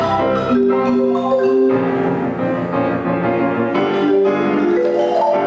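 Gain pumping runs through the whole clip, most likely from input gain set far too high for the microphone, with a fast limiter or compressor clamping down on every loud moment. The level rides up and down by around 10 dB. Quiet and loud passages sit unnaturally close together, giving a squashed, breathing quality, while the call microphone processing leaves nothing above 8 kHz.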